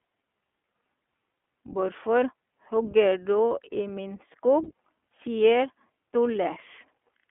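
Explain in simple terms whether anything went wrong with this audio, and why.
iLBC codec, throughout: this internet-phone coder squeezes the speech into a narrow telephone band, roughly 250 Hz to 3.4 kHz, so it sounds muffled, slightly rough and synthetic.

Lost iLBC frames, at 3.11 s and 4.64 to 4.68 s: a 20 ms piece went missing each time, and the decoder briefly repeated the last bit of voice, causing a tiny buzzy smear before recovering immediately.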